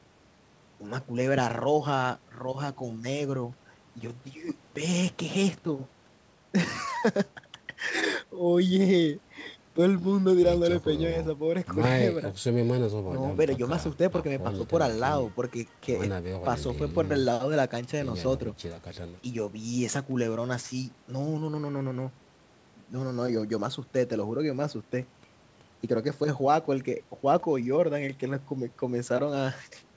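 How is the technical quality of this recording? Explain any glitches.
Nothing stood out on listening; the speech comes through as it would over an ordinary call connection.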